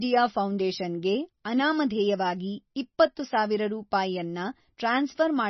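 MP3 compression runs throughout: nothing reaches above 5.9 kHz, and the speech has a heavy watery, swirling quality, likely from an encoder starved of bits, consistent with roughly 24 kbps, cutting the treble and letting weak frequency lines flicker between frames.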